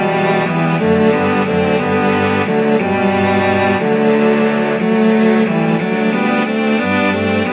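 No faults can be heard; the signal carries the narrow telephone band of a G.711 mu-law call path, with nothing above 4 kHz.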